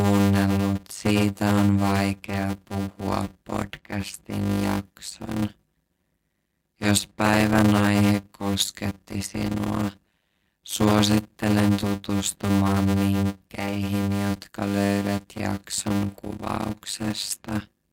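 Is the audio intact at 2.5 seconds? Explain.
No. At 2.5 seconds you're hearing a block size mismatch (padded), and it runs through the whole speech clip. One stage hands over shorter blocks than the next reads, and the remainder of each is zero-filled, so there's a tiny silence in every block. That gives a buzz at 100 Hz, and the speech plays at about 0.53 times normal speed with its pitch roughly intact. That fits 256-sample writes into 480-sample reads.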